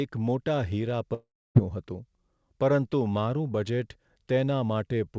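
At 1.14 s the speech breaks into a buzzy smear of the last sound that fades out, leaving 270 ms of near-silence before the audio returns at 1.57 s with 420 ms of material gone. The likely cause is a long network dropout: packets stopped arriving, the receiver stretched what it last had to cover the gap, then gave up, and playback resumed without the lost part. Throughout, nothing sounds above 8 kHz, in keeping with the G.722 call path.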